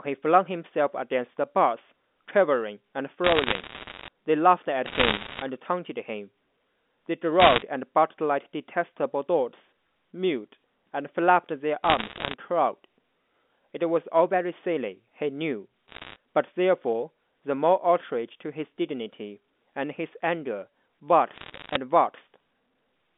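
Bit errors on a digital phone line appear first from 3.24 to 4.08 s, then 4.86 to 5.42 s, 7.40 to 7.62 s and 11.84 to 12.34 s. Flipped bits corrupt single samples, and hits on the sign or high-order bits produce sharp ticks. At an error rate of roughly one to a few percent, these merge into crackle laid over intact speech, densest in the 4.86 s and 7.40 s bursts.

A switching supply whistle runs from 15.49 to 19.94 s, a high tone moving between 8.2 and 9.0 kHz, roughly 45 dB below the speech. Its drifting pitch fits a supply in audible burst mode shifting with load. Further bit errors crackle from 15.88 to 16.16 s, inside the whistle, and again from 21.36 to 21.76 s, both at a lower rate of about one percent.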